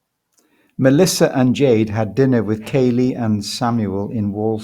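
No technical faults can be heard anywhere in the speech recording.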